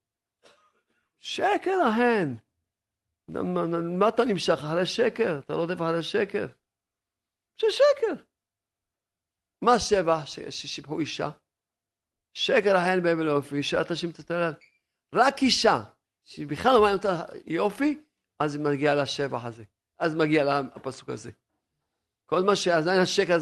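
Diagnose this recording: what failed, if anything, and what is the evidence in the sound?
Nothing failed here: listening along the whole speech recording, there's no point where any stage in the chain gives itself away, so there's nothing to diagnose.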